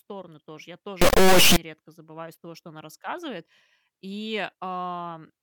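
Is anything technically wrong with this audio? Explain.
Yes. From 1.02 to 1.56 s, right after "тоже я" and before "редко забываю из того", there's an integer-read-as-float fault: 32-bit integer samples get interpreted as 32-bit floats, so values land near zero or way past full scale. You hear a brutally loud square-wave buzz dropping out to silence.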